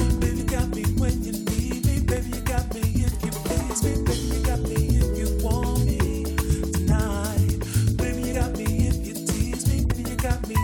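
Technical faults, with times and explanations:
0.38, 4.54, 8.33 and 9.90 s, compressed frames skipped: each is a short smeared blip where the sound lurches forward by roughly 100, 50, 70 and 100 ms. Whole frames of about 23.2 ms were dropped in decoding, and their overlap with neighbouring frames softens each jump.
2.17 to 2.19 s, loud pop: a single sharp pop sits a few decibels above the sound, which carries on unbroken beneath it. This is likely a brief voltage pulse from a switch, plug or static discharge added to the signal.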